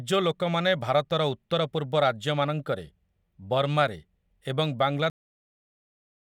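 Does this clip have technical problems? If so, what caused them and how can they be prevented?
Yes. At 5.10 s the speech stops abruptly mid-sound and falls straight to digital silence for the remaining 1.1 s or so, with no natural decay. This is a cut-off end: the final buffers of audio were never written to the file or passed to playback, so the recording simply ends wherever the last completed buffer did. To prevent it, flush and close the recording stream only after all pending buffers have been written.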